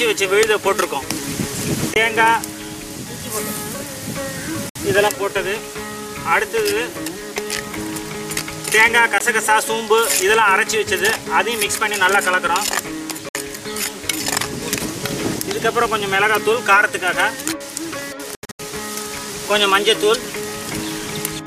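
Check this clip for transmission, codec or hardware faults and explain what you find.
The clip has five gaps, most likely a Bluetooth dropout each time: audio packets reached the headphones too late and were discarded, so the output cut to silence before resuming as though playback had continued.

At 1.94–1.96 s, a 20 ms hole fits one lost packet.

At 4.69–4.76 s, a 61 ms silence suggests about three consecutive packets missing.

At 9.18–9.21 s, another brief 20 ms cut-out occurs.

At 13.29–13.35 s, a second 61 ms gap leaves a hole.

At 18.35–18.60 s, about 203 ms of audio vanishes in bursts scattered over 244 ms, the longest lasting 81 ms, so the sound stutters rapidly before recovering.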